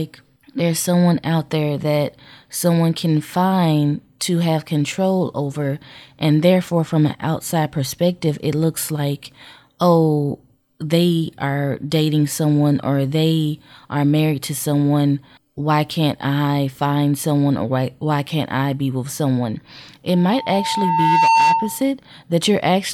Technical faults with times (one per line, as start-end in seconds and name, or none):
20.09-21.89 loudspeaker feedback squeal